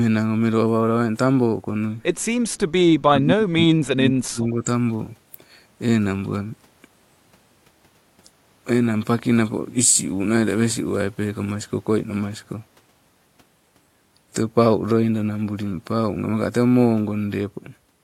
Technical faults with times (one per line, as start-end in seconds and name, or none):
2.51-2.58 echo leak
2.98-4.67 speech suppressed in double talk